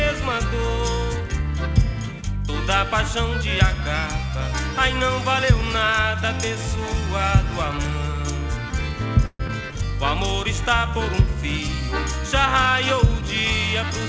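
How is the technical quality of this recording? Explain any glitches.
The recording has three brief glitches clustered between 9.26 and 9.91 s, all typical of a call path that carries nothing above 8 kHz, which fits a G.722 wideband codec.

Call audio freeze, 9.26 to 9.41 s: the jitter buffer likely ran empty because packets were held up in transit. The receiver stretched the last sound into a fading fill for about 135 ms, ending in roughly 30 ms of silence. Playback then resumed where it stopped, so nothing is lost, only delayed.

Skip ahead, 9.47 to 9.50 s: a short stretch of audio, around 70 ms, was dropped while later audio was already waiting, pulling the delay back by roughly 50 ms. Playback jumps forward, and the two sides are joined almost directly with only a tiny bridging fill.

Jitter buffer slow-down, 9.61 to 9.91 s: the buffer was rebuilding its reserve by repeating single pitch periods, adding 35 ms. 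For that moment the sound runs at 90% speed at unchanged pitch, so it seems slightly drawn out.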